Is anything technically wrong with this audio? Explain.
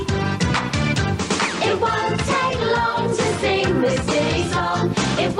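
No, nothing technically wrong can be heard here.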